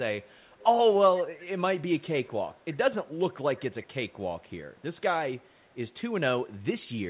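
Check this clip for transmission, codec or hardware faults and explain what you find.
One fault recurs: echo leak, heard five times, at 0.22 to 0.66 s, 1.98 to 2.77 s, 3.56 to 4.13 s, 4.49 to 5.01 s and 5.37 to 5.78 s. A faint copy of the speech trails it by 341 ms, roughly 25 to 40 dB down. This is likely a far-end loudspeaker's echo canceller failing to remove what its microphone picked up. The speech is band-limited at 4 kHz, as expected from a G.711 call path.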